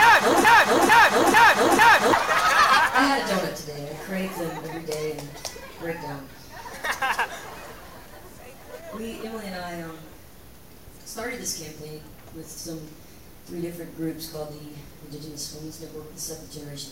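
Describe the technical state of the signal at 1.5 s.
At 1.5 s the signal is inside a broken-record loop that runs from 0.45 s to 2.13 s. A fragment about 0.45 s long plays four times in a row, each pass identical, while the audio meant for that stretch never arrives. The likely cause is a player or stream stalling and resending its last held fragment. Unlike an echo, the repeats don't fade or overlap, and they are far longer than a brief stutter.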